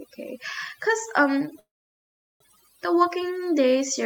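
Overdone noise removal runs throughout. Quiet frequency bands are cut away, leaving a reduced, twinkling background. From 1.59 to 2.43 s, a call audio freeze. Sound trails into 0.75 s of silence, then resumes intact, 0.81 s late, likely from delayed packets emptying the jitter buffer.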